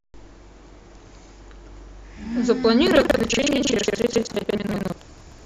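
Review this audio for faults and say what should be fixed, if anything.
From 2.83 s to the end, the speech takes on a robotic rattle at 21.5 Hz. This is buffer tearing: writer and reader have slipped, so around two-fifths of each period, which fits a 2048-sample buffer, replays audio from roughly 150 ms earlier. Unlike periodic dropouts, it vanishes in silence. Keep the write pointer a safe margin ahead of the hardware read position and resynchronise on any slip.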